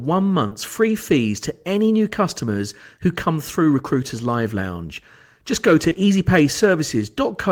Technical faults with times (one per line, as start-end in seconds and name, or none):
0.47-0.53 short concealed packet loss
5.89-5.97 short concealed packet loss